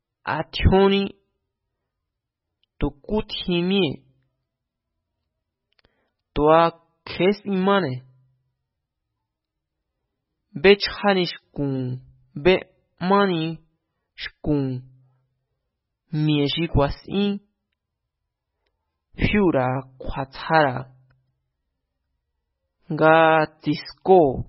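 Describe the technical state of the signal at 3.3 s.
At 3.28 s there is pre-echo. A brief hiss, about 11 ms long, arrives just ahead of a sharp attack in the speech. The codec spreads its quantisation noise across a whole transform block. Here the attack sits late in that block, so noise scaled for the loud onset also fills the quiet gap before it. The onset sounds softened and smeared rather than crisp.

Underneath, the whole signal carries heavy MP3 compression damage. Nothing is present above 5.5 kHz, so the treble is cut flat. Weak frequency lines drop in and out from frame to frame. That gives the speech a watery, swirling quality, with metallic chirping on s sounds. The depth of damage likely comes from a very low bitrate, which fits roughly 16 kbps.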